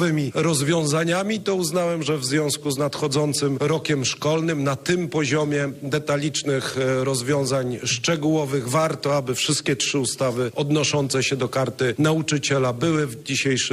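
No technical faults can be heard anywhere in the audio, and the signal holds steady throughout.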